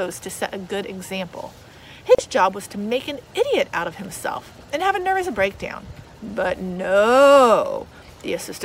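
At 2.15 s the sound drops into a brief silence of about 36 ms, ending at 2.18 s, with softened edges before picking up where it left off. This is a gap at a join of encoded pieces: the encoder's start delay and final-frame padding were left in.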